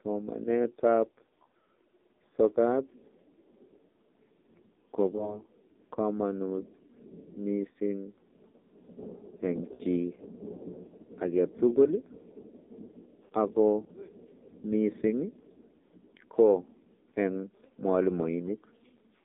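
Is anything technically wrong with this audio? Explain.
Yes. The whole clip has passed through the AMR narrowband mobile codec. The sound is confined to roughly 250 Hz to 3.7 kHz. The codec models the vocal tract with a few pulses per frame, and the damage here is heavy. The speech sounds buzzy and synthetic, which fits the low 5.9 kbps mode.

There are also lost AMR speech frames, at 5.16 to 5.41 s, 9.74 to 9.82 s and 13.26 to 13.32 s. The decoder filled each gap by reusing the last good settings with falling gain. The first gap suggests a single lost frame, a brief warble. The later two fit runs of about 60 ms and 40 ms, which sound smeared before the speech recovers roughly.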